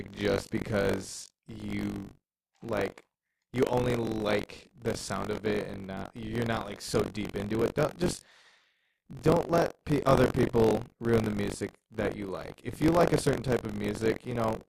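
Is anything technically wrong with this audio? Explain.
Yes. Buffer tearing runs throughout the speech: writer and playback have slipped within the ring buffer, so each period carries a small slice of audio about 40 ms stale with hard joins, producing a robotic 46.9 Hz buzz under the voice that fits a 1024-sample buffer.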